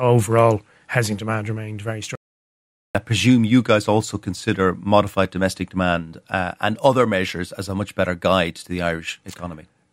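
The input feed was likely interrupted while the recorder kept writing silence, an audio dropout to silence. After "housing demand remained very" the speech cuts off at 2.15 s into total silence with no room tone, returning at 2.95 s on "I presume you guys"; about 0.79 s is lost.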